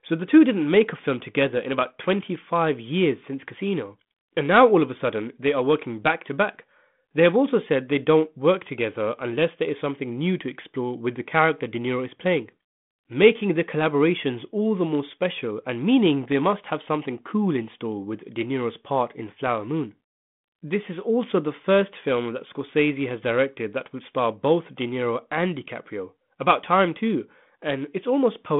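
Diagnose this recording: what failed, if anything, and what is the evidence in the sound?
Nothing failed in this recording.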